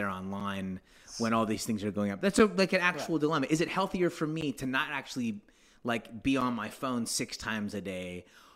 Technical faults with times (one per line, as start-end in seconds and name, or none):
0.40 gap between stream segments
2.39 gap between stream segments
4.41 gap between stream segments
6.41 gap between stream segments